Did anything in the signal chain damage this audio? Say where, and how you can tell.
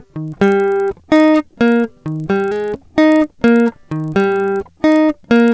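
Yes. A resampler restarted on every block, in the sample-rate conversion stage, damages the music from 0.28 s to the end. A steady 25 Hz buzz rides on the signal, which fits 40 ms blocks. Each block edge is converted without its true neighbours, likely in a 44.1 kHz to 16 kHz downsample.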